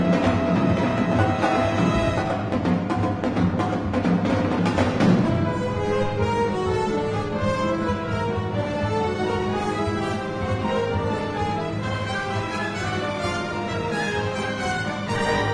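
Nothing in this one trips the ear at any point; it just rolls along without a single hiccup worth flagging.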